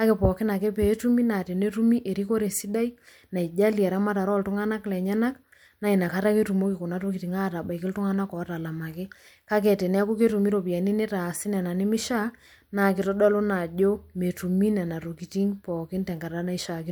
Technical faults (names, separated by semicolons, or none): none